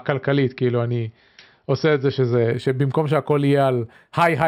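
From 2.52 s to 4.48 s the speech shows imaging from linear upsampling. The sound points to a low-rate signal, consistent with 12 kHz, brought up to 48 kHz by straight-line interpolation between samples. That interpolation filters poorly, so the upper band is dulled and a mirrored copy of the spectrum survives in the 6 kHz to 12 kHz region, about 35 dB below the signal, adding a faint metallic shimmer to sibilants.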